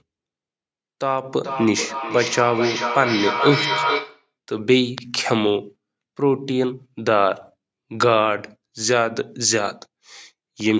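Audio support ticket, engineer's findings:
Feedback echo between two devices, 1.44 to 4.31 s. Speech loops back roughly every 400 ms, each pass thinner and ringier, loudest repeat about 4 dB under the direct speech. Likely two endpoints on the same call in one room: one device's playback leaks into the other's mic, and each echo canceller only strips what its own device played. Call mic processing in the chain too, band tops out at 8 kHz.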